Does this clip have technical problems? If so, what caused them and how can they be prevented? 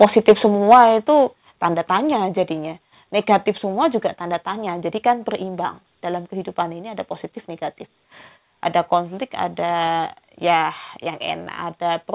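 Yes. Between 0.71 and 0.78 s the loudest peaks turn harsh and crackly, their tops flattened about 6 dB past the converter's limit with roughly a tenth of samples cut off, the likely result of microphone overload from input gain set too high. Lowering the input level beforehand prevents it.

The level drops suddenly in one step, by about 4 dB at 0.74 s, right inside that distorted burst, and by about 5 dB at 1.74 s just before "tanya jadinya negatif semua". The microphone volume stepped down, likely the call software's automatic gain reacting to clipping. Disabling automatic gain control and setting a safe fixed level prevents it.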